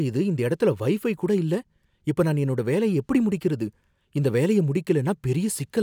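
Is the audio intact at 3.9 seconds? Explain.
Yes, the speech at 3.9 seconds is intact, with no fault to be heard at that moment.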